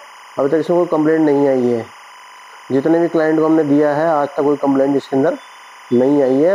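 Timecode bleed runs through the whole clip: linear timecode from an adjacent line has leaked in, its square wave flipping between tones near 1 and 2 kHz, which fits 25-frame code. It sits well below the main sound as a steady chirping warble.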